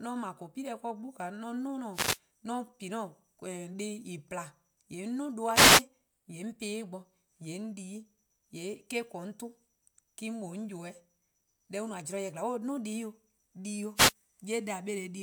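Three quick wireless microphone noise hits turn up in the speech, at 1.92 to 2.19 s, 5.52 to 5.84 s and 13.95 to 14.13 s. Each is a brief swish of static lasting about a fifth to a third of a second. What's going on is the FM radio link fading as reflected signals cancel the direct one, so the receiver's own hiss surges up before the signal recovers.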